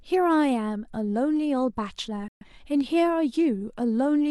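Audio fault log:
2.28–2.46 s, digital broadcast dropout: the speech fades out within about 3 ms and the audio falls silent, returning further along the programme. Roughly 128 ms of material is lost, which fits a few consecutive frames failing and the receiver muting until valid frames resumed.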